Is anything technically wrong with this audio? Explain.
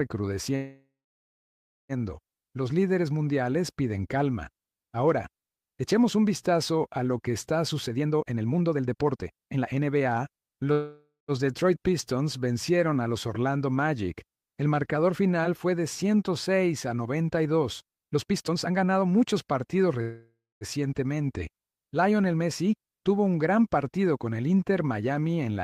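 Yes. There are two kinds of fault.

Call audio freeze at 0.55 to 1.92 s, 10.72 to 11.31 s and 20.02 to 20.64 s: the last sound hangs as a fading buzz, then falls silent for about 0.97 s, 0.15 s and 0.23 s respectively. The likely cause is delayed packets draining the jitter buffer. The audio resumes where it stopped, with nothing lost, only late.

Jitter buffer speed-up at 7.87 to 10.63 s (143% speed, about a second trimmed) and 17.82 to 19.95 s (126%, about half a second): the sound rushes ahead at unchanged pitch as the receiver cuts tiny pitch-period slices to shed excess buffered delay.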